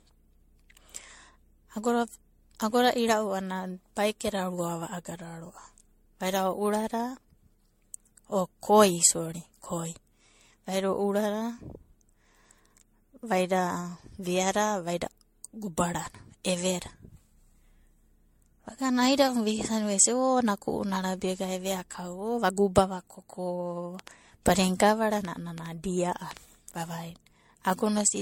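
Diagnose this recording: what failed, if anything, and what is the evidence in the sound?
At the codec stage, this speech shows generation loss, likely from being encoded as MP3 at 64 kbit/s around seven times over, each pass requantising on a shifted frame grid. Throughout, it sounds swirly, hollow and smeared, attacks blur, and nothing survives above 16.6 kHz.

A train of clicks runs from 23.99 to 26.38 s, likely interference or a struggling interface injecting pulses into the path. About ten similar ticks arrive at an irregular 4.6 per second, peaking at about 10 dB above the speech level.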